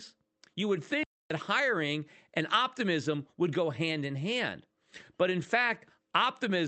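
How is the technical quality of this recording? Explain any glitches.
The recording has one clear glitch: a brief dropout early in the speech. The audio sounds like it came through a call codec, with the top end rolled off around 8 kHz, as with an Opus call link.

From 1.03 s to 1.30 s the speech cuts to silence for about 270 ms mid-flow, then resumes with "hiring and optimism would". This is a playback stall, likely caused by the player running out of buffered data or its audio thread being blocked. Output went silent until data arrived again, leaving a sudden gap rather than a fade or crackle.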